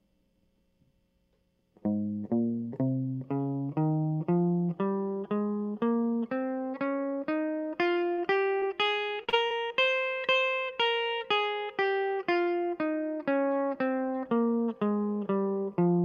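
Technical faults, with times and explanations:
8.13–8.20 s, 8.60–8.64 s, 9.24–9.34 s (two back-to-back losses), 9.46–9.52 s: short concealed packet loss. The music briefly smears and wobbles as 20 to 40 ms chunks arrive too late, and the receiver extends the preceding sound before blending back into the real audio.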